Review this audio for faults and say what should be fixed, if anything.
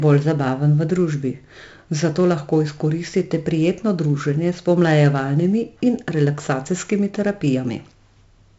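4-bit ADPCM compression runs through the whole speech clip. Gritty hiss rides on every loud syllable and drops away in pauses, which a steady noise floor wouldn't do. Nothing sounds above 7.7 kHz, which fits 64 kbps at 16 kHz. To prevent it, encode from the original source with a lossless or modern codec.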